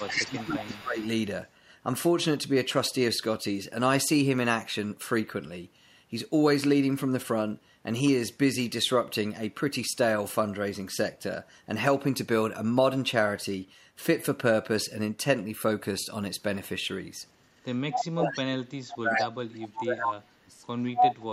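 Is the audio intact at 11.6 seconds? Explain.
Yes, the speech at 11.6 seconds is intact, with no dropout, click, distortion or other fault at that moment.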